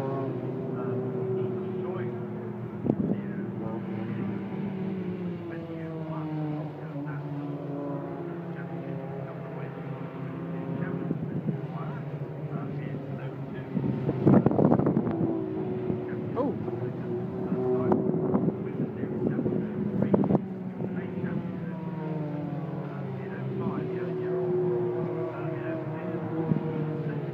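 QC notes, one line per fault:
Nothing to flag here, there's no fault to note anywhere in this one.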